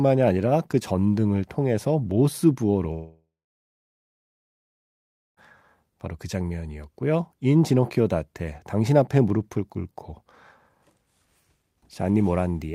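From 2.93 to 5.39 s, a long network dropout likely halted delivery: the last sound fades as a buzz or hiss into about 2 s of silence, and 2.44 s of speech is gone.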